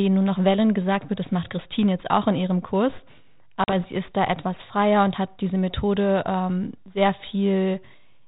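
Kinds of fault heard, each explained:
Packet loss on an ADPCM call: a few packets drop out as a hard 40 ms hole, and the decoder losing track briefly roughens the return at "sie ist da etwas".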